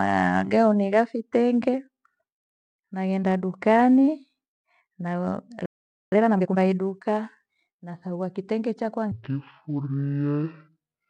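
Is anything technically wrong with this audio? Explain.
Yes. The speech has three faults.

From 5.66 to 6.12 s there is a playback stall. The speech stops mid-flow and goes silent for about 0.46 s. The player likely ran out of data or had its thread blocked. It then resumes.

From 6.12 to 6.58 s comes a time-compressed catch-up. The player clears its backlog by cutting out short pieces and cross-fading the rest. The speech runs at twice normal speed. Pitch stays normal.

From 9.12 s to the end, the section plays at the wrong speed. It runs at about 0.6 times normal speed, likely because it was played against the wrong clock. Speed and pitch drop together. The voice turns slow and deep, roughly ten semitones lower.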